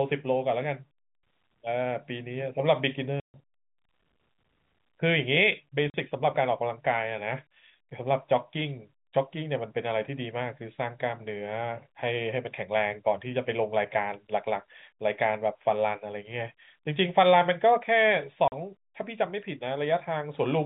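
Packet loss filled with silence hits the speech at 3.2 s for 140 ms, then at 5.9 s and 18.48 s for 40 ms each. Lost packets were replaced by digital silence, leaving hard-edged holes whose lengths suggest 20 ms packets over the narrowband G.711 telephone line.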